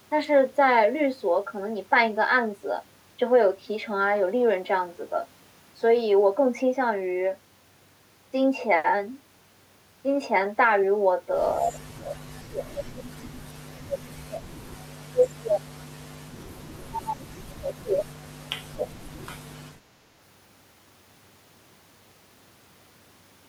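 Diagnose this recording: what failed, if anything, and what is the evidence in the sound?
Call processing is at fault: speech suppressed in double talk at 11.56–14.47 s, 14.95–15.68 s and 16.73–19.52 s, with the voice pulled down by roughly 30–35 dB. The echo canceller likely could not separate the talker from loudspeaker echo and attenuated both.

A brief echo leak, also from call processing, appears at 15.21–15.28 s. It is a faint delayed copy of the voice, 228 ms late and about 25 dB below it, likely residual loudspeaker pickup the canceller missed. It is a distinct repeat, not a smooth reverberant tail.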